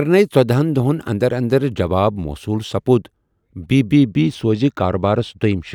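Channel delay (comb filtering) sets in at 3.92 s and lasts to the end. One channel lags the other by roughly two samples before the two are summed to mono, cancelling shared content with a first notch near 10 kHz, so the speech turns dull at the top.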